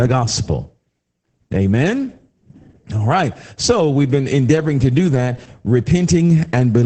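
Speech squeezed through Opus voice compression in SILK mode, consistent with about 10 kbps, cuts everything above 8.8 kHz and coarsely codes the excitation, leaving it muffled, hoarse and faintly robotic throughout.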